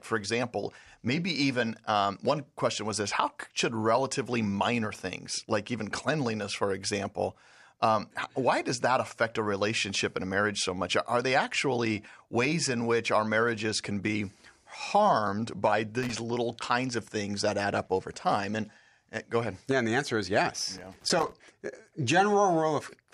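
At 16.03 to 16.15 s, after "can be harmed by", and again from 20.77 to 21.32 s, after "the answer is yes", loose connector crackle appears: a worn contact intermittently breaking the signal path, chopping the speech into irregular bursts of scratchy crackle.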